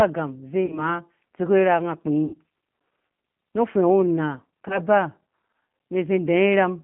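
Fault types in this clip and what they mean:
G.729 codec: plainly rough, slightly synthetic speech confined to about 150 Hz to 3.5 kHz, from an 8 kbit/s codec rebuilding the voice with pulses and filters.
VoIP packet loss concealed by the speech codec: smeared stretches fading out near 0.66, 2.25 and 4.68 s, where the decoder filled lost packets by extrapolating its last frames.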